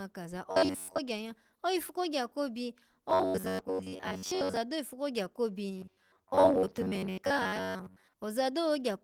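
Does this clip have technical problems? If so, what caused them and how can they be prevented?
Yes. There's robotic sound from repeated short buffers in three stretches: 0.51 to 0.99 s, 3.10 to 4.57 s, and 5.78 to 8.13 s, the last one starting right after "kogya ko". The speech turns into a stiff, metallic buzz pinned at about 94 Hz, which points to a chunk of roughly 10.7 ms being looped. The likely cause is audio arriving late, so the player keeps replaying its last buffer and skips most of the real sound underneath. The light Opus coding you can hear elsewhere isn't involved. To prevent it, give the playback side a bigger jitter buffer and steadier delivery so it never runs dry.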